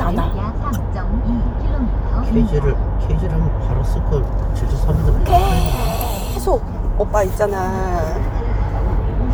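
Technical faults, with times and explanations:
6.01 s electrical switching spike: a nearby switch or static discharge likely arced into the audio line, adding a brief, sharp snap on top of the sound.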